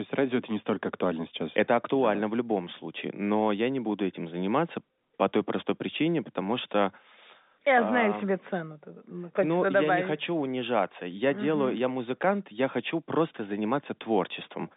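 Nothing goes wrong anywhere here; the speech just carries the narrow 200 Hz to 3.7 kHz band of ordinary G.711 telephone coding, which is simply how a landline call sounds.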